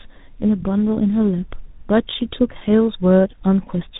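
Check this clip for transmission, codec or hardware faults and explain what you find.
One transmission fault runs through the whole clip: tandem speech coding. From start to finish the speech sounds like it passed through two speech coders in a row, with a GSM full-rate stage feeding a G.711 A-law link and then G.726 at about 40 kbit/s. Each coder re-encodes the previous one's losses, so the roughness, muffling and warble compound. On a spectrogram, energy stops sharply at about 3.8 kHz and the harmonics look smeared and grainy; the waveform looks coarse rather than smooth.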